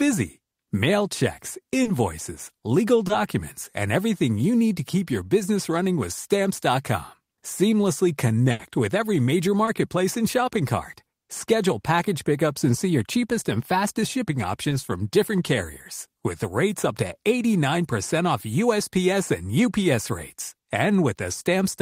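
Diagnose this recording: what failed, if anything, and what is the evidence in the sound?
Network packets in this speech stream repeatedly missed their playout deadline, and the decoder concealed each gap. This is short concealed packet loss: about 20 ms of audio was lost each time and replaced with a continuation of the preceding sound before crossfading back. The result is a brief smear or wobble at 1.83–1.87 s, 3.07–3.11 s, 9.65–9.69 s (between "with every major" and "and shopping cart") and 14.69–14.73 s (between "cheapest and fastest shipping" and "from different carriers").

A longer network dropout, a burst of packet loss, occurs at 8.51–8.61 s, just before "with every major". Several consecutive packets, or one long one, failed to arrive in time, leaving about 80 ms with no real audio. The receiver extended the last sound and faded it as the gap continued, so a held buzz or decaying hiss is audible. 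The speech then resumes further on, and that 80 ms of the original is missing.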